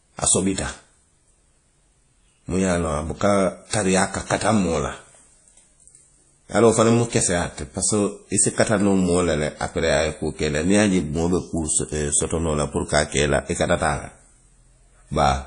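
Throughout the speech, what sounds like WMA compression at a low bitrate, likely around 32 kbps, has coarsely quantised the signal and dropped weak components. Nothing remains above 10.1 kHz, and the voice carries a ringing, washy smear with hiss that breathes alongside it.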